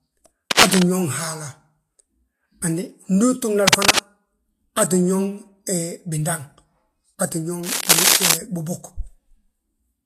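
A speech clip with two problems. Throughout, the sound is hissy and grainy. The treble is rough and smeared, and consonant attacks are blurred. This is likely Vorbis compression at a low bitrate; the damage points to something near 35 kbps. At that rate the encoder cuts the high end and codes the remaining detail so coarsely that it turns into noise. The codec damage is plainly audible. There are also three bursts of scratching, rustling noise: 0.51 to 0.83 s, 3.67 to 4.00 s, and 7.63 to 8.35 s. Each sits a little above the speech, about 5 dB louder. The dense, uneven texture suggests cable scratch noise, with the likely cause a worn cable, connector or control being moved. Its contact resistance jumps around as it shifts, and those jumps enter the signal as noise.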